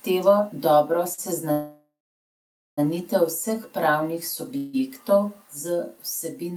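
At 1.13 to 1.20 s there is a short stall from a late packet: the last sound is held for about 44 ms with a slight buzz or dip, then the speech resumes from the same point. It is too brief to fade into silence, which sets it apart from a freeze.

Call audio freezes follow at 1.52 to 2.79 s and 4.57 to 4.75 s. These were likely caused by delayed packets emptying the jitter buffer. The first stretches the last sound into a fading buzz or hiss that decays to silence for roughly 0.87 s before the speech continues. The second lasts about 0.16 s and fades without going silent. In both, nothing is lost, only delayed.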